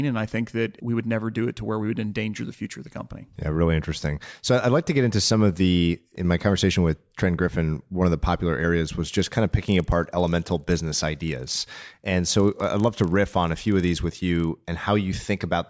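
From 9.04 to 14.48 s, after "of the popular areas", the resampler restarted on every 40 ms block, so edge errors buzz at 25 Hz.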